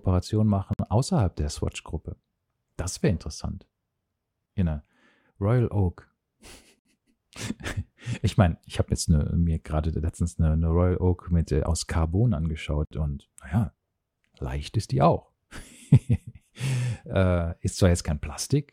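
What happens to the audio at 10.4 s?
Nothing goes wrong at 10.4 s; the speech carries on intact through that moment with no dropout, click or other fault.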